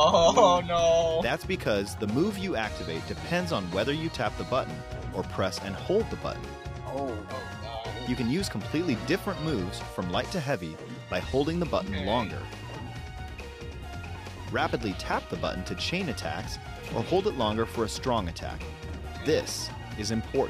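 Listening through the recording, nothing stood out as a technical problem at any point.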